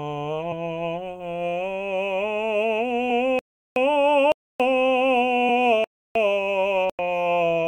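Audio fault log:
0.51 s, 3.09 s, 5.48 s: compressed frames skipped. The music jumps ahead by about 50 ms, 200 ms and 20 ms, roughly 2, 7 and 1 frames of 23.2 ms. This fits frames that were lost or refused as damaged by the decoder.
3.39–3.76 s, 4.32–4.60 s, 5.84–6.15 s, 6.90–6.99 s: block of digital silence. The music cuts straight to silence for 372, 279, 312 and 93 ms and returns with no fade. The first and last gaps fit 16384- and 4096-sample output buffers left unfilled.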